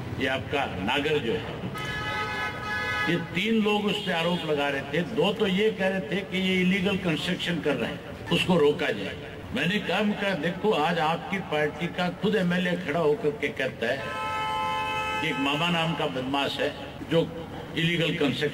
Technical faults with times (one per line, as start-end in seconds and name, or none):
none